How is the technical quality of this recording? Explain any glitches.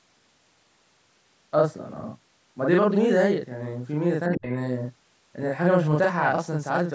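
The recording has three audible faults: a constant doubling of the speech, and a brief overlapping disturbance just after four seconds. The call processing keeps everything below 8 kHz, so the top end is limited.

Channel delay (doubling) runs through the whole clip. One channel arrives 40 ms behind the other, and when the two are folded to mono the late copy sits alongside the original at equal level. Every syllable sounds thickened, with a short slapback behind it.

Speech suppressed in double talk occurs from 4.28 to 4.5 s. The talker's voice drops sharply, by as much as about 25 dB, for about a fifth of a second. This is likely because the echo canceller confused the talker with loudspeaker echo while both sides spoke and turned everything down.

Other side's voice leaking through overlaps this, from 4.35 to 4.53 s. A faint second voice, about 25 dB below the speech, briefly slips into the microphone path. 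The likely cause is that the echo canceller failed to remove all of the loudspeaker playback during the overlap.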